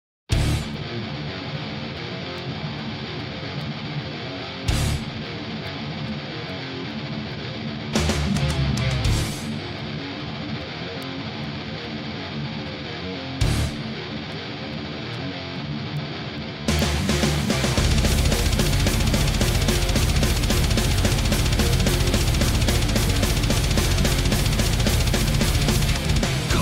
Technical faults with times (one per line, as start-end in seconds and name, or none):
0.33-26.26 word clock ticks